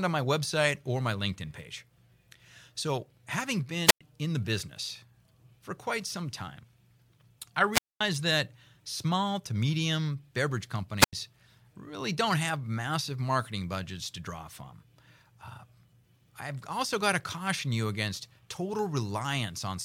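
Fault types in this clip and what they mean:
Wireless microphone squelch dropout: the fading radio link trips the receiver's mute, leaving hiss-edged silences of 0.09 to 0.23 s, unlike clean digital gaps.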